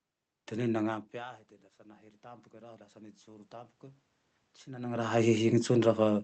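From 0.85 s to 4.11 s the automatic gain rising fault appears: after the level reaching the microphone fell by about 22 dB, apparently as the talker moved away around one second in, the gain control judged the input too quiet and slowly pushed its gain up by about 8 dB. The speech and the room noise swell together over those three seconds, so the background creeps up audibly rather than the voice alone recovering.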